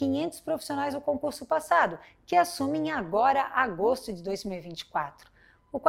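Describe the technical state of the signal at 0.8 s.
At 0.8 s the audio carries overlap-add ripple, which runs through the whole clip. The frames were rejoined with uneven overlap gain, so the level swings by about 6 dB around 150 times a second, giving a metallic buzz. The waveform envelope pulses regularly, and the spectrogram shows sidebands about 150 Hz apart.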